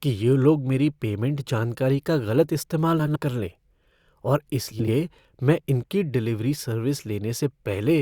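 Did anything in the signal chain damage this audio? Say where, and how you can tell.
Yes, in the network: frames out of order at 2.99–3.17 s and 4.71–4.92 s, heard as brief garbled flutters where adjacent 80 ms blocks swapped.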